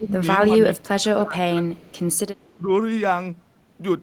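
Speech suppressed in double talk, from 0.00 to 0.24 s and again from 0.49 to 1.62 s: the speech dips by about 10 dB at first, then by as much as about 20 dB in broken patches over roughly 0.7 s. This is likely an echo canceller mistaking overlapping talk for echo and turning the talker down with it.

Echo leak, at 1.74 to 2.15 s and 2.37 to 2.56 s: a faint copy of the speech trails 312 ms behind, about 35 dB and then about 40 dB below it. The likely cause is a far-end loudspeaker whose echo canceller let some of its own microphone pickup return down the line.

Speech suppressed in double talk recurs at 2.57 to 2.69 s, a brief dip of about 15 dB.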